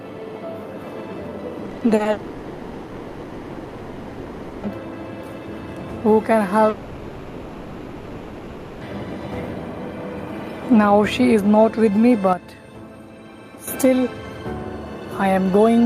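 From 1.65 to 2.07 s there's repeated packet loss giving that robotic sound: seven short holes, the longest about 40 ms, each patched by stretching the previous bit. Roughly 43% of that span is filler, so it sounds choppy.

Right after, from 2.11 to 4.65 s and again from 6.69 to 8.83 s, the real audio vanishes and you get a smeared, droning continuation instead, never dropping to silence. That's likely a long network dropout, with concealment papering over the missing 2.5 s and 2.1 s.

At 12.33 s the whole thing, background included, drops about 9 dB in one step and stays down until 13.68 s, then snaps back. No ramp either way, which points to a sudden gain jump.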